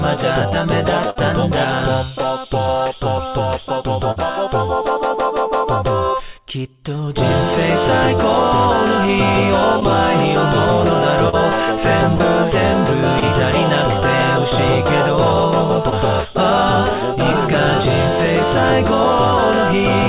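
A burst of packet loss occurs at 1.10–1.17 s and again at 12.15–12.22 s: consecutive packets were lost or arrived too late, so the receiver extended the last sound for about 50 ms, fading it, before jumping ahead and skipping 60 ms and 40 ms of audio respectively. Short concealed packet loss appears at 4.11–4.18 s, 9.80–9.83 s, 11.29–11.35 s, 13.20–13.24 s and 15.90–15.94 s, where a 20 to 40 ms hole was patched by continuing the preceding sound and crossfading back, heard as a brief smear or wobble. All of this rides on a telephone-band call path with nothing above 4 kHz, which fits G.711 mu-law coding.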